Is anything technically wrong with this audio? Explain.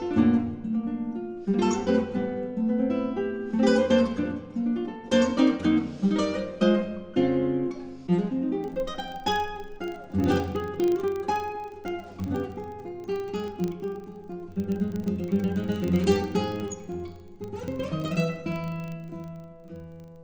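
Yes. From 8.64 s to the end at 20.23 s, the audio carries a filter restarted on every block. The filter discards its internal state at each block boundary and starts again from silence, so every block opens with a small transient. These repeat at 25 Hz, which points to blocks about 40 ms long, and form a steady buzz. Unlike mains hum, this buzz rises and falls with the signal's level and drops away in quiet passages. Unlike buffer dropouts, it is strictly periodic and leaves no gaps.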